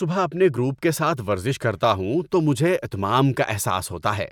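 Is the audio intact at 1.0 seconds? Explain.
Yes, the audio is intact at 1.0 seconds, with no dropout, click, distortion or other fault at that moment.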